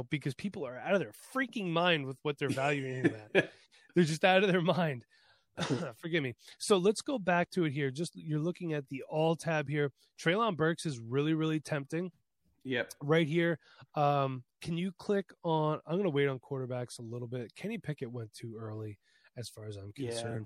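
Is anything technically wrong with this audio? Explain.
Yes. Throughout the speech, the sound is watery and swirly, with dulled treble. Likely MP3 compression at a low bitrate, around 64 kbps, zeroing weak frequency lines.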